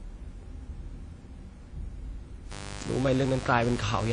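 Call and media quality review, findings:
Whole clip, speech band cut off at 10 kHz. Ringing, washy smearing around syllables. Hiss that swells and fades with the speech. Coding damage plainly audible. Likely WMA compression. Transform codec with long blocks. Quantisation noise spread over tens of milliseconds. Weak spectral lines zeroed. Points to a low bitrate, around 32 kbps. Suspect the encoder setting in the media path.

From 2.52 s to end. Steady, raspy mains buzz on 50 Hz. Harmonics reaching into the kilohertz range. Level fairly high, roughly 10 dB under the speech. Sharp switching spikes twice per mains cycle. Suspect a dimmer, a rectifier or a missing shield.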